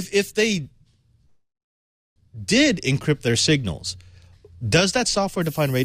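At 1.25 s there's a call audio freeze: the last sound hangs on as a fading buzz that drops to silence, then resumes at 2.18 s, likely packets held up and the jitter buffer running dry. From 5.42 s to the end, low bit depth with noise shaping takes over, around 7 bits, with a fairly loud, thin hiss pushed up toward the top of the band.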